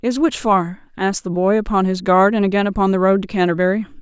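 No technical faults can be heard anywhere in this speech recording. At no point does the sound itself go wrong.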